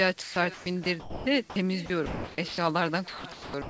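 From the start, the speech is shadowed by an echo with no canceller. A quieter, thinner copy, about 19 dB down, trails each sound by roughly half a second.

Between 0.22 and 1.56 s, 1.86 and 2.58 s, and 3.08 s and the end, sound is chopped, likely by the sender's voice detector. About 600 ms, 460 ms and 460 ms are replaced by synthetic comfort noise.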